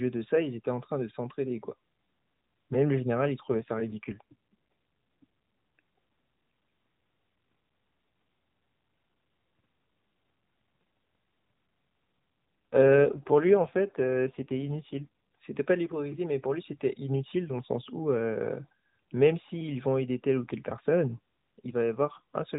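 From 3.46 to 5.25 s and again from 12.73 to 15.41 s the speech turns rougher and more synthetic, with no gap and no change in bandwidth. Both are AMR rate drops, which fits the network dropping the codec from 12.2 to 5.9 kbps.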